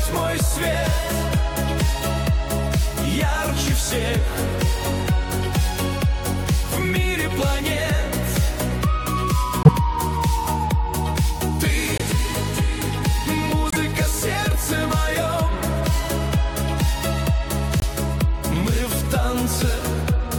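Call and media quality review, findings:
Corrupt frame muted, four hits: 9.63–9.69 s, 11.98–12.02 s, 13.70–13.76 s, 17.79–17.84 s. Dropouts of 40 to 64 ms that cut in abruptly. Probably the decoder rejecting bit-damaged compressed frames, one to a few each time, with the player filling the gaps with silence. Timing holds, so the audio picks up on schedule. Worth checking the transport or error protection upstream.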